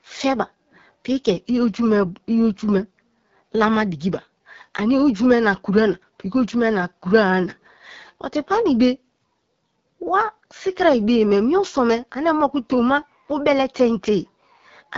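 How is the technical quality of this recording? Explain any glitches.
Poor, because of one fault that runs through the whole clip. The speech passed through the AMR wideband (HD Voice) codec at a very low rate, one that fits 8.85 kbit/s, modelling the voice as pulses through a vocal-tract filter. Throughout, it sounds plainly rough and raspy, with nothing above 7.5 kHz.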